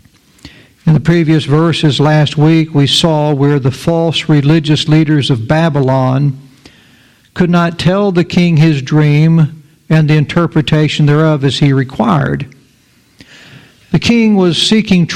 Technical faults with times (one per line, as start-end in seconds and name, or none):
0.00-15.15 hard clipping